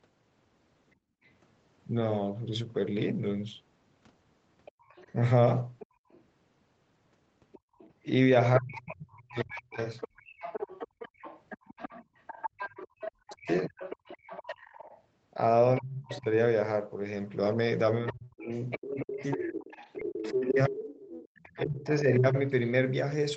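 Speech recorded over a call, with nothing above 8 kHz, in line with a 32 kbps Opus path. The background is gated by the echo canceller. The room sound drops by about 23 dB between 0.96 and 1.23 s. It dips again, by up to about 29 dB, at moments between 4.72 and 12.99 s. The canceller clamps the microphone while the loudspeaker plays, then releases it. A second voice is heard faintly. It appears as a very quiet scrap at 1.24 to 1.29 s, then more strongly from 4.65 to 22.0 s, roughly 15 dB below the main speech. This is likely the other side's voice leaking through, left behind by incomplete echo removal. The main speech also dips and cuts out in pieces. Between 8.59 and 9.79 s it falls by roughly 35 dB. From 13.32 to 22.35 s it drops by about 30 dB, for around three seconds in total. This is likely speech suppressed in double talk, where the canceller turns down both voices at once.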